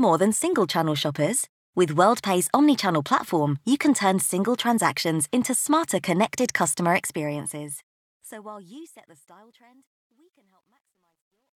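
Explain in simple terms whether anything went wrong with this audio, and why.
Something did go wrong. From 6.89 s, right after "transactions into smarter connected", the speech fades out as expected, but the quiet tail turns gritty, worst from 9.05 s to the end. This is truncation distortion on a fade, which fits a 12-bit volume stage that rounds without dither.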